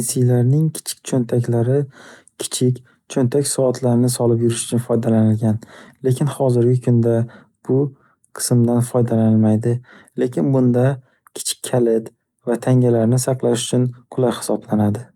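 No technical faults can be heard anywhere in this speech recording. At no point does anything in the audio go wrong.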